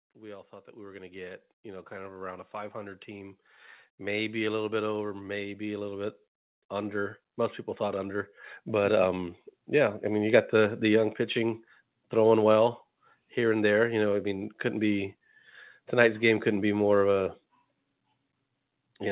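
From 0.16 to 7.2 s, automatic gain rising lifts the level by about 14 dB. The gain control judged the input too quiet. Speech and background swell together. A second rise of about 5 dB follows from 7.77 to 10.84 s. Everything stays band-limited below 4 kHz, as the call path leaves it.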